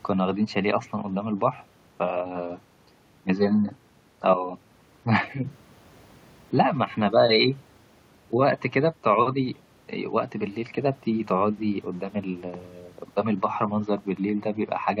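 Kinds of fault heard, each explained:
No faults detected in this speech recording; level, continuity and timing hold steady throughout.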